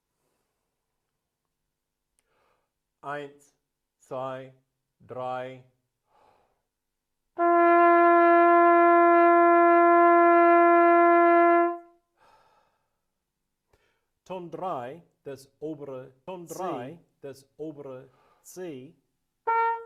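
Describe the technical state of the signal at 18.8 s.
At 18.8 s a doubled audio track runs (16.28 s to the end): an equally loud full-band copy trails about two seconds behind, likely from a slower second capture path, showing as overlapping, shifted repeats in the waveform and spectrogram.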